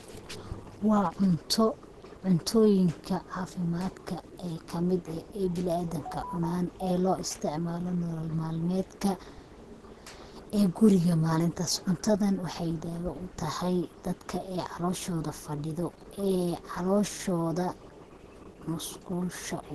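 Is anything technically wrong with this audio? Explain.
Yes, the whole recording carries Opus compression damage, and it's plainly audible from start to finish. The speech sounds somewhat muffled and hoarse, with a grainy roughness, and nothing is left above about 12.1 kHz. That's likely a low-rate Opus encode: starved of bits, it narrows the bandwidth and runs in its hybrid mode, with the speech coder handling the lower band. The thinness points to a rate around 16 kbps.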